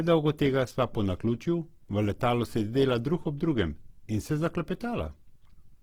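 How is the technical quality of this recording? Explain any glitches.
The quality is noticeably compromised by codec damage across the whole clip. Opus compression, running from start to finish, is the likely cause: the encoder keeps the energy of each frequency band but cannot afford the fine detail inside them, so it patches bands with folded copies of lower content or with noise. Across the speech this comes through as a rough, grainy texture, consistent with a low bitrate around 16 kbps in music mode, while the bandwidth still reaches about 20.3 kHz.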